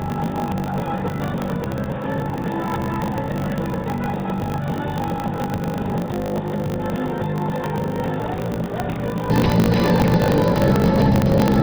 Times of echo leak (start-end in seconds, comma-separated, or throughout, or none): none